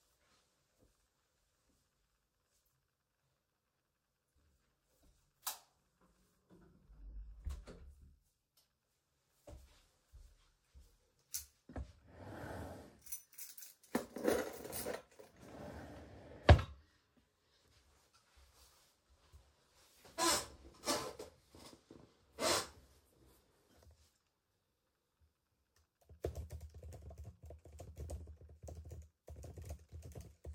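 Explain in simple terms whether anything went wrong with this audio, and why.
Nothing stood out as wrong when listening to these sounds, so there is nothing here that needs explaining or fixing.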